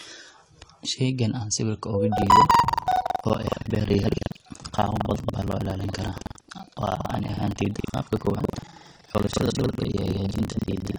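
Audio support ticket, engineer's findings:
Whole clip sounds dull and smeared, fizzy on sibilants. Likely AAC compression at a low bitrate, AAC-LC around 32 kbps by the sound. Codec throws away high bands and coarsely quantises the rest.

Buffer tearing from 2.14 s to the end: steady robotic 21.5 Hz rattle under the speech, which fits a 2048-sample ring buffer. Writer and reader have slipped, so roughly a third of each buffer replays audio about a fifth of a second old, hard-joined.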